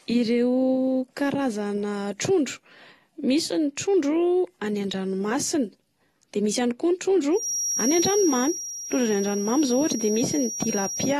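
AAC compression runs from the start to the end. Nothing is heard above 12.4 kHz, and the speech sounds dull and smeared, with a fizzy, warbling grain on sibilants and held sounds. The likely cause is an AAC-LC encode at a low bitrate. An encoder at this level, which fits roughly 32 kbps, quantises each frame's frequency lines coarsely against a hearing model, drops the top band and leaves gaps elsewhere in the spectrum.

A feedback whistle enters at 7.30 s and continues to 11.20 s, when the clip ends. It is a thin, steady tone at 5.7 kHz, sitting roughly 10 dB under the speech and swelling and fading slowly in level. It likely comes from a loudspeaker-to-microphone loop poised at the edge of feedback, where one frequency keeps ringing without building into a runaway howl.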